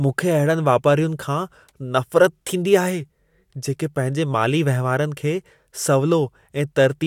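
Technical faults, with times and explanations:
No technical faults detected.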